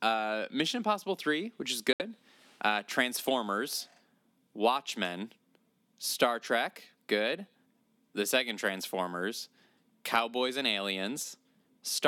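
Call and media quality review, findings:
Likely Bluetooth dropout: packets late to headphones and discarded, output muted. Speech cuts out 1.93–2.02 s, right after "three which is", then resumes further along, the gap skipped.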